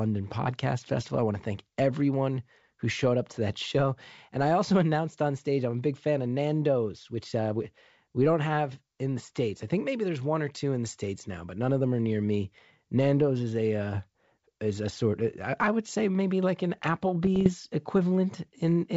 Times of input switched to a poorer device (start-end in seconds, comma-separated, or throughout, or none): none